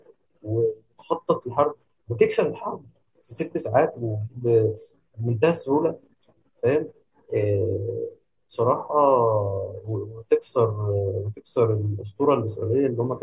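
A speech recording with no technical fault to report. Nothing in it needs a time or a cause.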